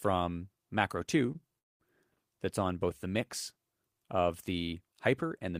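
At 1.26 to 1.29 s and again at 1.32 to 1.36 s there are two short stalls from a late packet. Each time the jitter buffer ran dry and the last sound was stretched, by about 17 ms and then 26 ms, so it is held slightly too long with a faint buzz or dip. On a spectrogram the harmonics run flat and repeat briefly before the sound resumes unbroken.

From 1.59 to 1.81 s a call audio freeze sets in, likely from packets held up in transit. The sound drops into about 210 ms of silence, then carries on from the same point after a 212 ms pause. The waveform shows a flat gap, and the spectrogram shows a blank vertical band.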